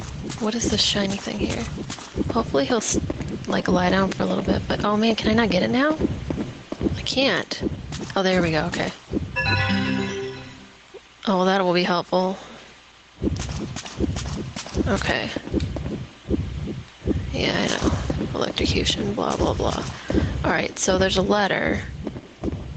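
Gain pumping runs throughout: the input gain was likely set far too high for the microphone, so a fast limiter drags the level down on every loud sound by around 10 dB. The sound is left squashed, with nothing above 8 kHz.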